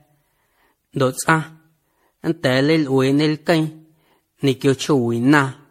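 Throughout the speech, the sound is swirly, smeared and hollow, with blurred consonant attacks and nothing above 16.4 kHz. This points to generation loss, likely from around ten successive MP3 encodes, consistent with 64 kbit/s, each requantising on a shifted frame grid.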